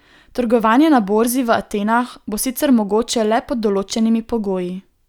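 Speech, with no audible faults.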